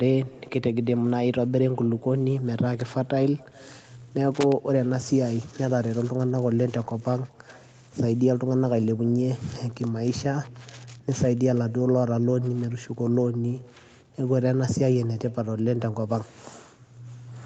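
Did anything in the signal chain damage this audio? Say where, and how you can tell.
Yes. Echo with no canceller runs through the whole clip and sits in the call processing at the far end. Every phrase returns roughly 400 ms later as a faint, thin copy, about 28 dB below the direct speech. That lag matches a network round trip: the far side played the call on a loudspeaker, its microphone captured it, and no echo canceller removed it before sending it back.

Loose connector crackle appears from 4.35 to 4.52 s, in the analogue wiring. For that brief stretch the signal breaks into an irregular burst of scratchy crackle, lasting under a fifth of a second. The cause is a worn or dirty contact making and breaking as it moves, chopping the signal. The call encoder limits the band to 8 kHz.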